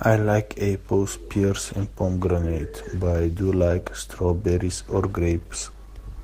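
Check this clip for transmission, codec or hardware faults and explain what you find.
One fault: an adaptive stream at a lower bitrate. From 1.39 s to the end, the stream switched to a cheaper encoding after the connection slowed, which fits a step from 64 to 16 kbit/s Opus. The speech abruptly picks up codec artefacts, with no gap at the switch.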